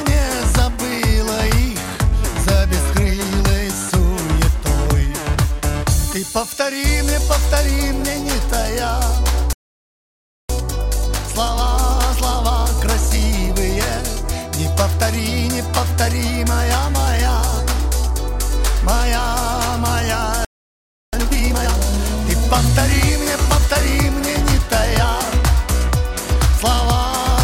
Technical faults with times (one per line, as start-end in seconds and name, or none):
9.53-10.49 playback stall
10.49-13.49 time-compressed catch-up
20.45-21.13 playback stall
21.13-21.81 time-compressed catch-up